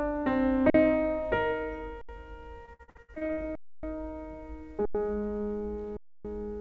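At 0.7 s the first underrun with held sample occurs. The output buffer runs dry for 43 ms and the converter freezes on its last value. The waveform sits flat, so the sound simply halts without a click and then resumes exactly where it stopped, with nothing skipped. The same stall returns at 2.01 s for 73 ms, at 3.55 s for 279 ms, at 4.85 s for 93 ms (which fits a 4096-sample buffer at 44.1 kHz), and at 5.97 s for 279 ms. Unlike packet loss, each one is a single clean pause with no content lost, and the resume is soft.

Between 2.66 and 3.44 s comes repeated packet loss with a robotic sound. Eleven holes open in under a second, the longest 62 ms, and each is patched by stretching the preceding sound. About 46% of the stretch is this synthetic fill, so the passage turns choppy, with real pieces gone rather than merely paused. All of it passes through a G.722 call path at 64 kbps, which leaves nothing above 8 kHz.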